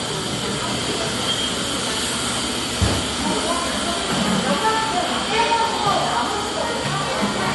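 From start to end, the audio was likely encoded first as low-bitrate MP3 and then saved again as high-bitrate MP3, so it is low-bitrate audio saved at a high bitrate. The second pass cannot restore what the first discarded. Nothing sits above 11.5 kHz, a hard ceiling that fits an MP3 of around 48 kbit/s, and these everyday sounds come across dull and smeared at the top despite the large file.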